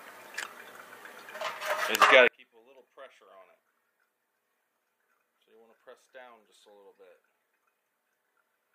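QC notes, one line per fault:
2.28 to 8.75 s, one channel inverted: from here the sound drops by about 30 dB when folded to mono, with the centred material cancelling out, leaving just a faint residue. That's most likely one side flipped in polarity, so the shared content subtracts.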